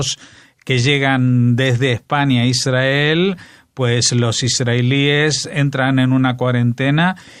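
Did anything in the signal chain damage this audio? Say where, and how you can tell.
No, nothing in the chain.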